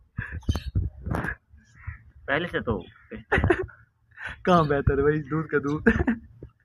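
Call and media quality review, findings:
Nothing stood out on listening; no findings to log against this clip.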